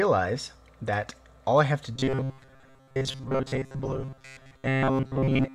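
The audio turns robotic from 1.95 s to 5.55 s, right to the end of the clip. A rigid, metallic buzz at 133 Hz sits over the sound while its broad shape still comes through. This is robotic sound from repeated short buffers. The likely cause is new audio arriving too seldom, so the software loops a fragment of about 7.5 ms. Roughly 70 percent of this stretch is repeated material, and the real audio in those gaps is lost.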